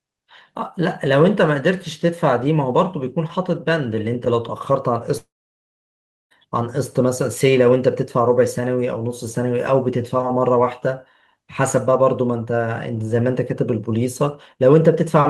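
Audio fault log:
5.17–6.34 s, long network dropout: The speech cuts off at 5.17 s. The last sound smears into a short buzzy hiss that fades within about a tenth of a second. About 1.04 s of near-silence follows. Speech resumes at 6.34 s, with roughly 1.1 s of content simply gone rather than delayed. The cause is likely a stall in incoming audio packets, with the receiver stretching the final fragment before giving up and muting.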